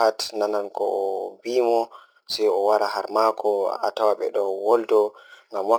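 Right through the speech there's crude rate conversion, likely samples simply repeated going from 44.1 to 48 kHz, leaving a gritty, inharmonic fizz about 30 dB down.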